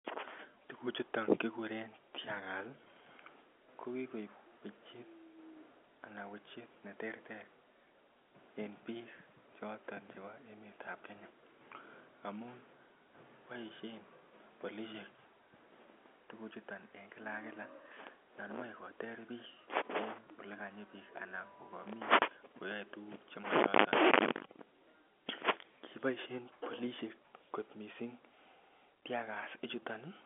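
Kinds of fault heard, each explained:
No faults can be heard in the speech. It arrives over G.711 telephone coding, which keeps it within a line band of about 250 Hz to 3.4 kHz with nothing above 3.7 kHz.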